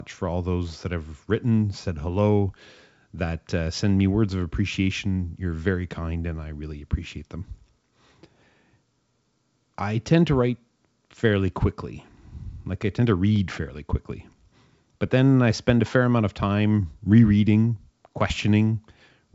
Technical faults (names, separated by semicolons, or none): none